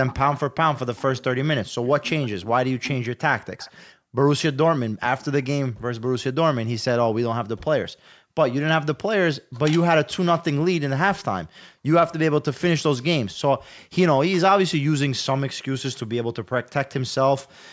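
In this speech clip, a faint, delayed second copy of the voice trails the talker from 0.07 to 3.82 s, lagging by about 214 ms and sitting roughly 20 dB below it. This is likely an echo leak: the far end's loudspeaker was picked up by its microphone and the echo canceller let part of it return. The room background then collapses by about 40 dB for brief moments at 3.93 to 4.15 s, 7.91 to 8.35 s, 9.41 to 9.54 s, 11.47 to 11.85 s and 13.59 to 13.69 s, each lasting roughly a tenth to four tenths of a second. This is background gated by the echo canceller, which sharply turned the microphone down while the loudspeaker was active and released it afterwards. The call's microphone processing also limits the band, leaving nothing above 8 kHz.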